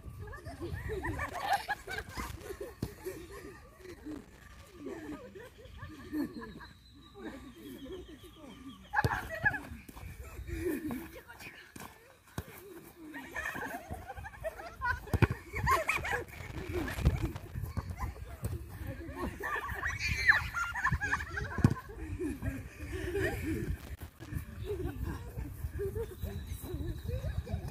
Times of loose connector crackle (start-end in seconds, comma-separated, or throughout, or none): 1.28-2.49, 3.81-4.74, 15.83-17.55, 23.79-24.28